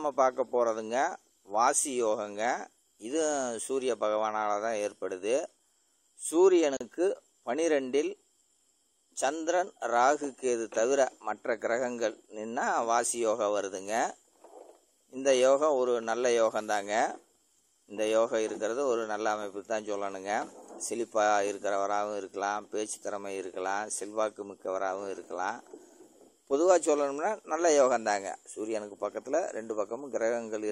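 The audio has a gap at a join of encoded pieces at 6.77–6.81 s: a 37.5 ms silence where separately encoded segments were joined untrimmed, their padding left in.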